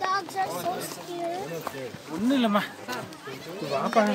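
Listening through the recording, nothing stood out as a technical problem at any point.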